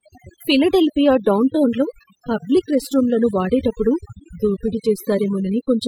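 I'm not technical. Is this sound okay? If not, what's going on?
No. Throughout the speech, the background drops and breaks up into twinkling specks. That is overdone noise removal: a cleanup tool set too strongly erased anything it took for noise, including quiet parts of the voice.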